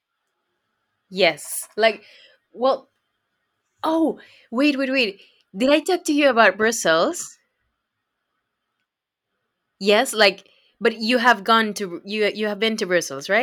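Nothing technically wrong turns up in this bit of speech, so there's no problem here to pin to a time or trace back to a cause.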